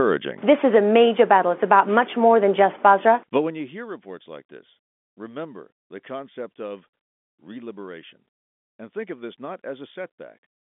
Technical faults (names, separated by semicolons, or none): none